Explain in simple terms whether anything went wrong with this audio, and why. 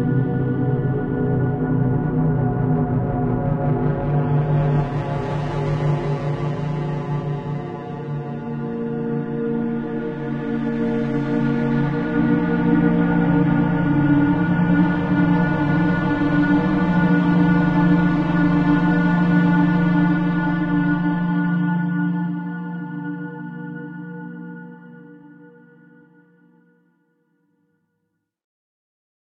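Something did go wrong. From 4.11 to 22.11 s the stream switched to a lower-quality version, an adaptive stream at a lower bitrate. The sounds turn duller, with nothing above about 9.8 kHz, and grainier. Unlike a dropout, the change is sudden but leaves no gap.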